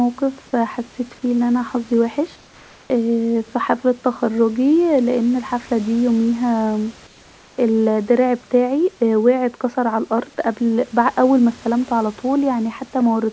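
Speech over a call path, with nothing above 8 kHz. Twice a pause loses its real room background: 2.36 to 2.90 s after "فيه ألي انا حظي", and 7.07 to 7.58 s after "أن الحفله ديه يوميها". Each gap gets a smoother synthetic noise about 3 dB quieter. This is comfort noise in place of the background, likely from discontinuous transmission.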